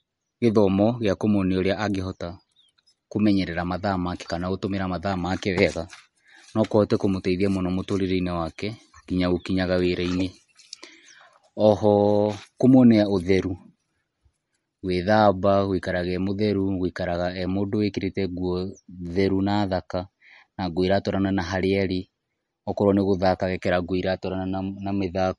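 Throughout, the speech sounds watery and swirly with nothing above 11.1 kHz. The likely cause is MP3 compression, at a bitrate that fits about 48 kbps.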